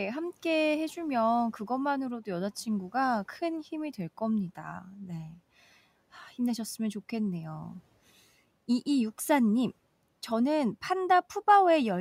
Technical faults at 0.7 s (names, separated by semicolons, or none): none